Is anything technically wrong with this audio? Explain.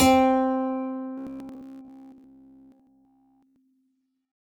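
Yes. From 1.18 to 3.58 s the music has robotic sound from repeated short buffers. It likely comes from repeating a 15 ms chunk throughout, which imposes a rigid, metallic 66.7 Hz buzz.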